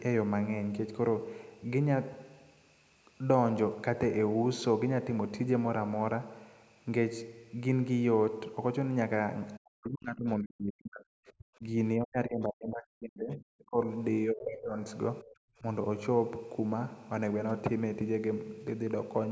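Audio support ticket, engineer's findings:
Speech suppressed in double talk at 9.58–11.76, 11.99–13.77, 14.26–14.78, 15.22–15.43 and 15.6 s; dips up to roughly 40 dB. Likely echo-canceller suppression. Level ducks during overlap.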